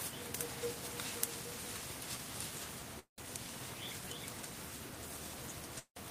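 At 2.99 to 3.24 s and again at 5.79 to 5.98 s there's a call audio freeze: the last bit of sound smears into a fading buzz, then about 110 and 80 ms of silence, before it picks up where it left off. That points to packets stalling and the jitter buffer likely running dry, adding roughly 185 and 170 ms of delay while losing nothing.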